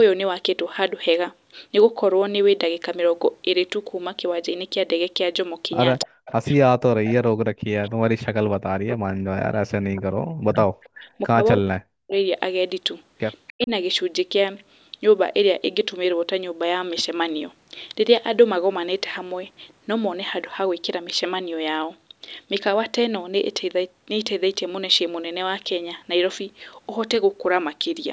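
Speech, band-limited at 8 kHz by normal call microphone processing, carries echo leak at 6.0–6.32 s, 10.52–10.89 s and 13.47–13.53 s: a faint copy of the far-end talker trailing by 297 ms, roughly 15 to 25 dB below the speech. This is likely a loudspeaker-side echo canceller letting residual pickup through. Speech suppressed in double talk follows from 6.05 to 12.16 s, about five seconds in all, and again at 13.53–13.71 s. The talker dips by as much as 40 dB or drops out in pieces while the other side speaks, likely as the canceller attenuates both signals together.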